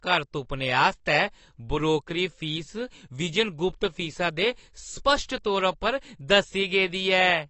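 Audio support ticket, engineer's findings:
Speech dull and muffled across the whole clip, nothing above 8.5 kHz. Sibilants smeared, with a warbling, fizzy edge on sustained sounds. Codec damage plainly audible. Likely cause: AAC compression (AAC-LC). The encoder lowered its cut-off and starved the upper bands, quantising each 1,024-line frame coarsely against its hearing model, which fits a low bitrate around 32 kbps. The smearing and fizz are the audible result.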